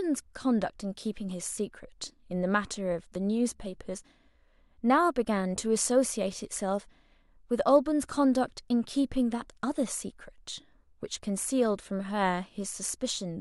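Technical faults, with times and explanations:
No technical faults can be heard in the speech recording, with level, timing and continuity holding steady across its whole length.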